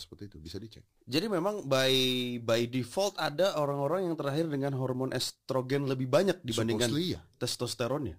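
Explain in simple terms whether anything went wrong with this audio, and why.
The sample clock jitter came from the converter that turns the sound into digital form. Its timing clock was unsteady, so each moment of sound was captured a little early or late at random, by roughly seven millionths of a second. Throughout this speech clip, that timing error adds a hiss or roughness on top of the voice. It gets stronger on loud and high-pitched sounds, where the waveform changes fastest, and disappears in the pauses.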